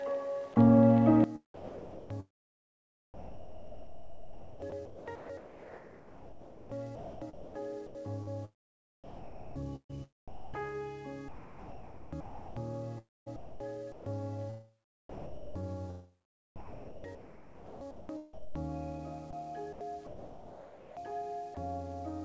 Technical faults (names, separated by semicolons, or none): sound dropped by the voice detector; sudden gain jump; sound chopped by the voice detector